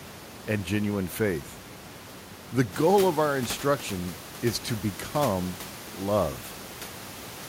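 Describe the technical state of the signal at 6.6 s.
At 6.6 s the signal is intact, with only the room's own background noise sitting about 17 dB below the speech.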